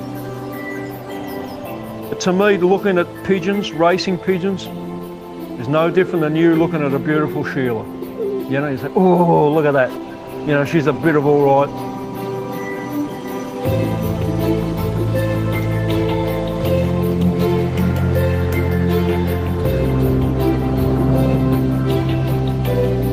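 At about 9.76 s there's a call bitrate drop lasting until 12.67 s. The encoder got squeezed, which fits a fall from around 32 kbps to 17 kbps, and for roughly 1.85 s the audio sounds rough and muffled before recovering.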